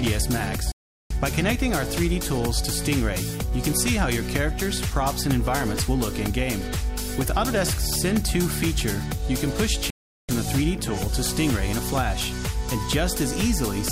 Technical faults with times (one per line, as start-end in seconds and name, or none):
0.72-1.11 digital broadcast dropout
9.90-10.29 digital broadcast dropout